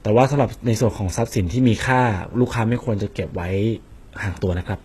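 From start to finish the speech carries heavy codec damage, most likely HE-AAC compression. The treble is present but synthetic: the highs are rebuilt from copies of lower bands, so s sounds come out gritty and metallic. Nothing reaches above about 12.3 kHz, and the coarseness fits a very low bitrate near 16 kbps. Unlike a plain low-pass roll-off, which leaves the top dull, here the top end stays bright but grainy and detached from the lower harmonics.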